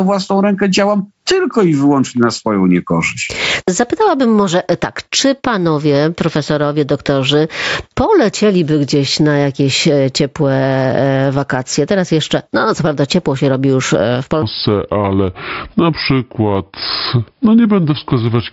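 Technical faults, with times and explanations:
Throughout, gain pumping: the gain ducks by roughly 15 dB under loud sound, likely a fast limiter fighting excessive input gain, unlike steady compression.
14.42–18.53 s, section at the wrong speed: playback runs at 0.69 times speed, so pitch drops about seven semitones and timing slows together, likely a clock mismatch rather than a pitch shift alone.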